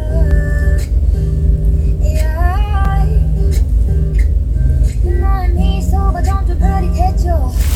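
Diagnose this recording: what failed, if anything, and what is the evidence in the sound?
Two blocks of digital silence, at 0.31 s and 2.85 s, about 2.5 ms and 4 ms long. The fault is at the driver or buffer stage. The output buffer was not filled in time, so zeros replaced the sound. The abrupt edges make short ticks.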